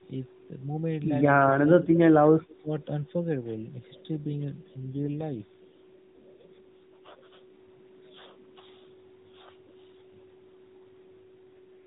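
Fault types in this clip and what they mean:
AMR rate drop: the network switched the mobile codec to a lower bit rate, so from 4.80 to 7.51 s and from 11.27 to 11.85 s the speech turns buzzier and more synthetic, with no gap or band change, which fits a step from 12.2 to 5.9 kbps.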